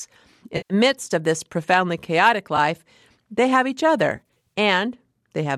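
AAC frame loss with concealment drops decoder frames, and the decoder patches each gap from the last good spectrum. From 0.57 to 0.74 s, just before "midst of this profoundly", about 130 ms is lost, which fits thirteen 10 ms frames, and the patch sounds smeared and noisy. At 2.57 s, after "of this profoundly chaotic", a single short blip is concealed. From 4.16 to 4.52 s, after "they have each", about 170 ms of losses scattered over roughly 380 ms, the longest run around 40 ms, cause a smeared, phasey patch. The stream is likely coded with low-delay AAC.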